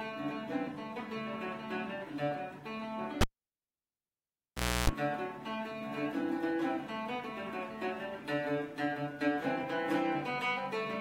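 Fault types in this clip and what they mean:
Cable pulled and plugged in: a live lead is yanked out and reinserted from 3.21 s to 4.90 s, with a pop, about 1.64 s of near silence broken by roughly 0.31 s of 60 Hz mains buzz as the plug tip makes contact, before a second pop restores the sound.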